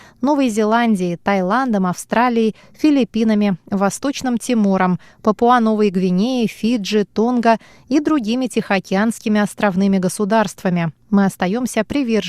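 At 11.90 s there is a brief jumbled flicker, a case of chunks out of order. A piece of audio about 5.3 ms long arrived one chunk late and played after its successor, so nothing is missing, but three hard joins briefly scramble the sound's continuity.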